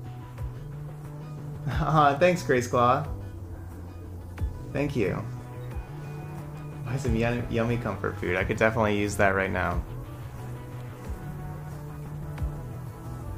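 No technical faults are audible.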